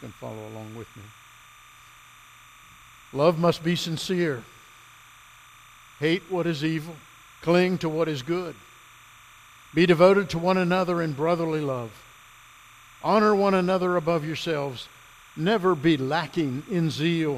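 Linear timecode from a neighbouring track or cable is leaking into the audio path for the whole clip, a fault known as timecode bleed. The code is a square wave that switches between about 1 kHz and 2 kHz as it encodes each bit, with frames passing at 29.97 per second. It sits roughly 25 dB below the main sound, heard as a constant, fast chirping warble running behind everything from start to finish.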